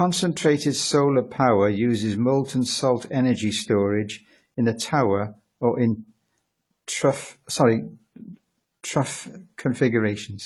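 From start to finish, the speech carries two layers of codec damage. The likely cause is transcoding between lossy codecs. The artefacts fit an AAC-LC pass near 32 kbit/s, re-encoded by HE-AAC near 48 kbit/s. Nothing sounds above 20.3 kHz.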